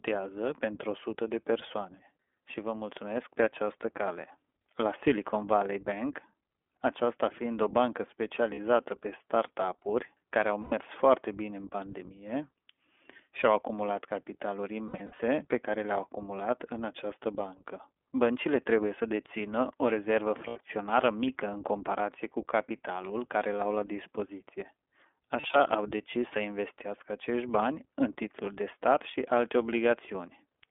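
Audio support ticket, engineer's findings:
Thin, band-limited speech throughout, slightly rough and synthetic, with no lows below about 250 Hz and nothing above 3.5 kHz. This is the iLBC codec on a narrowband line. The plainly audible coding damage fits the 15.2 kbps, 20 ms frame mode.

Brief held, buzzy vowel-like fills, each recovering almost immediately. These occur at 8.54 s (40 ms, after "aceasta fiind o bancă"), at 10.62–10.74 s (100 ms, between "care au" and "foarte bine în pandemie"), at 14.88–15.21 s (scattered over about 320 ms, runs up to about 70 ms), at 20.48–20.58 s (80 ms), and at 25.40–25.61 s (scattered, before "au decis să investească"). These are lost iLBC frames. The decoder repeats the last pitch cycle with noise, and the next self-contained frame restores it.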